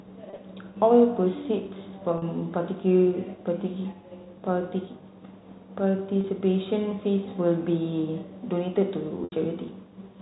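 Packet loss with pitch repetition occurs at 0.30–0.38 s, 2.18–2.22 s, 6.21–6.24 s and 9.24–9.32 s. The receiver fills each gap by repeating the last pitch period, so the short dropouts sound like a briefly held, buzzy tone. The 80 ms loss at 9.24 s outlasts the roughly 50 ms fade and dips toward silence before the speech cross-fades back.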